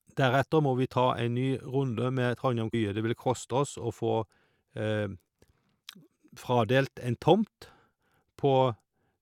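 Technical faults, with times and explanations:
2.73 s, stream segment skipped: the speech lurches forward at this point with a brief blip rather than a silent gap, and the delivery resumes at a later point than it left off, so a stretch of the talk is simply absent. The likely cause is one chunk of a segmented stream failing to arrive and the player moving straight on to the next. Unlike a dropout, nothing pauses; unlike a plain click, content goes missing.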